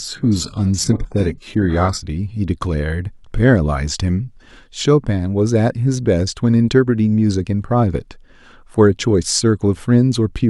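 From 0.0 to 2.0 s the speech sounds dull and swirly on top: an adaptive stream starting at a low bitrate, which fits roughly 12 kbit/s HE-AAC. At 2.0 s quality jumps without a gap, and the spectrogram's smeared, synthetic-looking upper band abruptly fills in.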